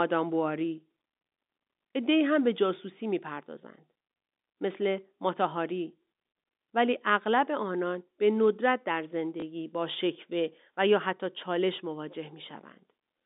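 At 9.40 to 9.42 s, packet loss with last packet repeated fills a 20 ms gap by replaying the previous packet, a single small blip rather than a silent dropout.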